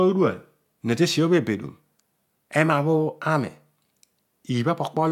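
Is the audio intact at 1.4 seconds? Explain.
Yes, the audio is intact at 1.4 seconds, with no dropout, distortion or other fault audible at that point.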